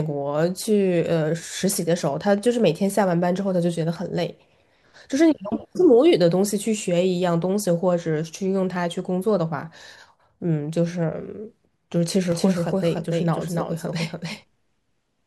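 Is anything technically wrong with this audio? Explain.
Yes. From about 12.32 s to the end, the speech is joined by a doubled audio track: a second full-band copy trailing roughly a third of a second behind, a few decibels quieter than the original. It cuts in abruptly, with no reverberant decay or room colour, so each syllable is followed by a clean, slightly softer repeat. The likely cause is the signal being captured twice, once through a slower path, or an edit leaving two copies out of alignment.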